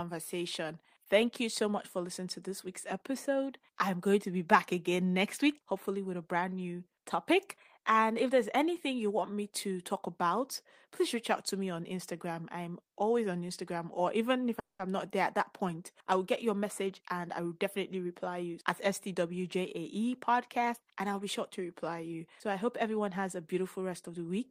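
A call audio freeze runs from 14.59 to 14.82 s, right after "or even if". The sound stops and trails off into near-silence for about 180 ms, likely because packets were held up and the receiver's buffer ran dry. Speech resumes intact with "I'm not there at", now about 200 ms later than before.

A jitter buffer speed-up follows from 16.64 to 19.15 s, starting after "I will get your". With surplus audio queued, the receiver repeatedly cut tiny pitch-period slices, about a fifth of a second in total, so speech runs at 108% speed with unchanged pitch and sounds rushed.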